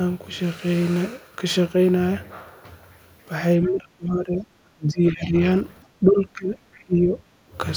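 From 3.67 to 4.46 s, 4.75 to 5.44 s and 6.0 to 6.56 s the speech sinks sharply, likely speech suppressed in double talk, with the echo canceller ducking the talker along with the far end. At 6.75 to 6.84 s there's a very faint scrap of the other side's voice leaking through, likely uncancelled loudspeaker echo. Then 6.84 to 7.18 s brings the deepest dip of the lot, likely the same double-talk suppression.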